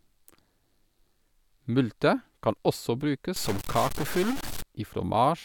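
From 3.36 to 4.62 s the speech goes harsh and buzzy, likely a stuck bit worth about -30 dBFS throwing half the samples off.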